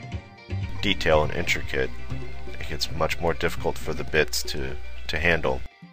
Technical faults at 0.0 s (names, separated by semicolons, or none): none